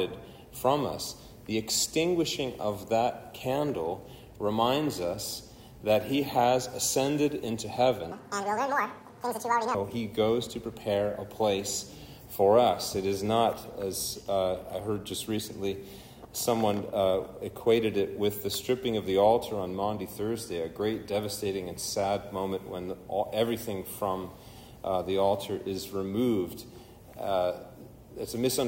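From 8.12 s to 9.75 s the audio is read two samples at a time (double speed): the reader treats each pair of samples as a single frame, so the material plays back at twice the rate and a full 12 semitones higher, an octave jump. The rise is exactly an octave. That sets it apart from time-stretching, which keeps pitch, and from a gentle sample-rate mismatch, which shifts pitch less.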